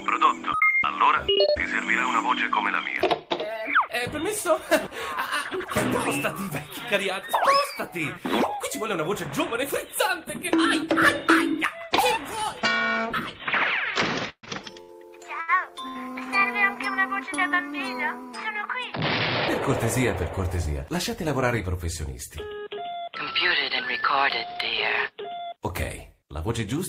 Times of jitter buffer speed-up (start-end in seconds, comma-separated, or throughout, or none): 18.33-19.58, 20.27-20.67, 25.08-25.43